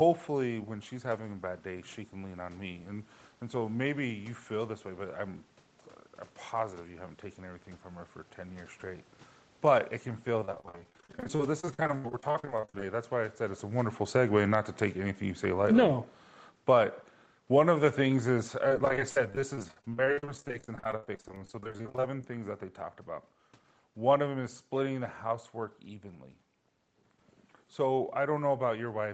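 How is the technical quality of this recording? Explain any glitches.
The recording has two glitches: the level is turned down partway through, and the sound breaks up in two separate stretches.

Automatic gain falling starts at 9.54 s, just after "years straight", and lasts until about 25.1 s. The call's gain control judged the input too loud or its background noise too strong and lowered the level gradually, by about 18 dB in total. The background noise sinks along with the speech. That is the sign that this is gain control and not a talker moving away, since distance would leave the room noise where it was.

Repeated packet loss (robotic sound) occurs from 10.40 to 12.85 s and again from 18.69 to 22.24 s. Dozens of short gaps were patched by stretching the preceding sound, with the longest gap lasting 66 ms in the first stretch and 71 ms in the second. About a third of each stretch is filled this way, which makes the speech choppy. 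Codec coding noise, by contrast, would be steady and would not stutter like this.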